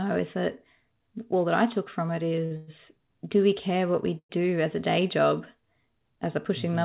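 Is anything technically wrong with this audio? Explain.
Yes, the audio has two faults.

From 2.36 to 2.89 s, just after "I took from it" and before "do we care what", there are repeated stalls (stutter). Packets kept arriving later than they were due, so the jitter buffer ran dry four times in about half a second. Each time the receiver stretched the last sound to cover the wait, about 171 ms in all and up to 108 ms at once, roughly a third of that stretch. Nothing is lost, but the speech drags and catches in short hiccups.

From 4.18 to 4.32 s, between "we care what we" and "as a", there is a call audio freeze. Packets were likely held up in transit, emptying the jitter buffer. The receiver continued the last sound as a brief fading buzz, then about 70 ms of silence, filling about 112 ms in total. When the audio resumes, it picks up exactly where it stopped, so speech is pushed later by that amount rather than cut. 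Throughout, the sound comes through a G.711 A-law call path with nothing above 4 kHz.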